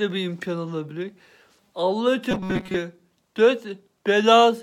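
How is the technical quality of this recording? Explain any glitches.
The recording has one clear glitch: a stretch of robotic sound from repeated short buffers between 2.31 and 2.77 s. There the audio turns into a rigid, metallic buzz at about 188 Hz that only loosely tracks the underlying sound. The likely cause is audio arriving too slowly, so the playback repeats a tiny slice, around 5 ms, which fits that 188 Hz pitch, in place of real material. Most of that half-second is filled this way.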